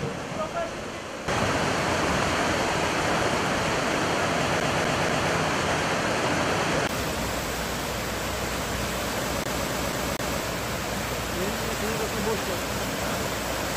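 A CD stuck on one turn replays the same 0.24 s of audio three times at 4.60–5.33 s and four times at 9.44–10.41 s. The waveform shows identical, evenly spaced blocks with thin silent gaps at each laser jump.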